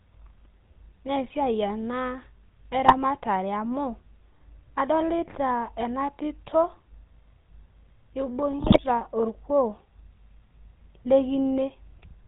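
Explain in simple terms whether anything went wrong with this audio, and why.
Yes, two things went wrong. The whole recording has a buzzy, gravelly roughness, and the sound feels boxed in, with no crisp top end. That is the GSM full-rate codec, the first codec used on GSM mobile phones. It rebuilds speech from a simple model of the throat and mouth driven by evenly spaced pulses, keeping only part of the detail. It passes nothing above 4 kHz, so the sound comes out dull and gritty.

Twice the speech briefly breaks into squawks, pops and gargling: from 2.84 to 2.97 s, and from 8.58 to 8.79 s, the longer of the two. These are GSM bit errors. Over a weak mobile link, some of the digital data arrived corrupted. The decoder then rebuilt those short stretches with the wrong tone shape, pitch or loudness, producing these sudden harsh bursts.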